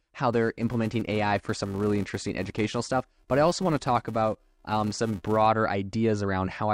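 A speech clip with a buzz at about 345 Hz riding on it from 0.33 s to 5.47 s, rising and falling with the level. That's a filter restarted on every block: it drops its state each block, so every block starts with a tiny tick, and the rate fits a 128-sample block.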